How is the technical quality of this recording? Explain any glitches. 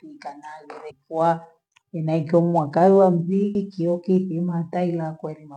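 Two brief glitches in the speech at 0.90 s and 3.54 s are damaged data in a compressed stream. At each point corrupted data makes the decoder misread the frame, lose sync and hunt for the next valid header, producing a short chirp or blip. Each of these lasts under 20 ms.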